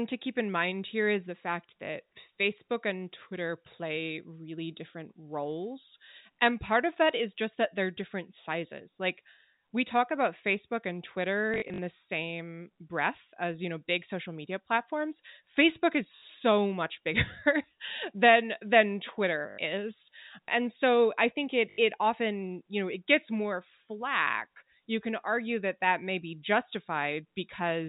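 At 11.54 to 11.78 s the speech breaks into a robotic stutter, caused by packet loss with the last packet repeated. About 140 ms of audio is missing, scattered over 240 ms, in runs up to 40 ms long. The receiver replays the last packet to fill each gap. The repeats buzz near 50 Hz, which fits 20 ms packets. Shorter stutters follow at 16.16 s (60 ms), 19.5 s (80 ms) and 21.7 s (80 ms). Around them, the telephone-band G.711 sound carries nothing above 4 kHz.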